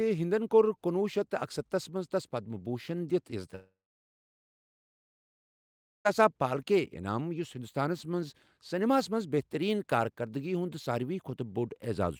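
A long network dropout runs from 3.55 to 6.07 s in this speech. Most likely, packets stopped arriving for about 2.5 s; the receiver stretches the last sound into a brief fading buzz, then about 2.3 s of silence follows before speech resumes with that stretch missing.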